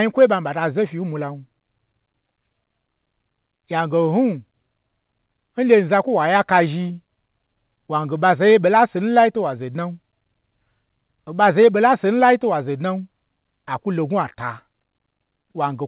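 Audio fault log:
No faults heard.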